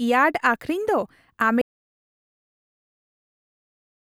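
At 1.62 s the speech cuts out mid-flow and never returns. An audio dropout to silence runs to the end. The gap is silent, with no room tone. The input was likely lost while the recorder kept writing silence.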